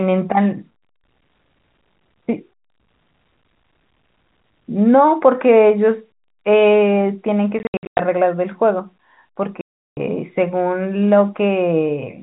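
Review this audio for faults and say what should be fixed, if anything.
Packet loss filled with silence, twice. From 7.59 to 7.99 s, about 280 ms drops out in scattered holes (longest 100 ms). From 9.61 to 9.97 s there's a solid 360 ms gap. The hole sizes fit 10 ms packets. A jitter buffer with proper loss concealment would fill those gaps instead of muting them.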